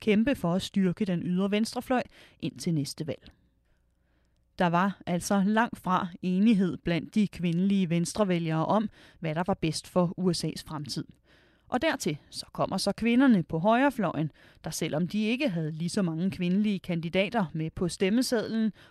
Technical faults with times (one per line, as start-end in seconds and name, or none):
none